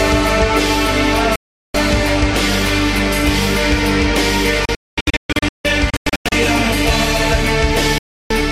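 At 1.36 s the music cuts out for about 0.38 s. From 4.65 to 6.32 s it breaks into several short holes, the longest 0.22 s. At 7.98 s it drops for 0.32 s. Each is a digital broadcast dropout: failed frames muted the receiver with a 3 ms fade, and that music is lost.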